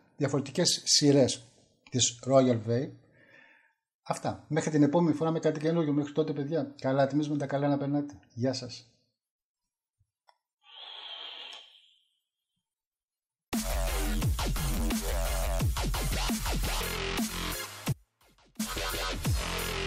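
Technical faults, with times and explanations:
17.93 to 18.59 s: audio dropout to a faint residue. The wanted signal was likely lost for about 0.66 s while the path after the break stayed live. The sound cuts off abruptly, leaving only a faint leak about 30 dB below its normal level, rather than a pause or fade.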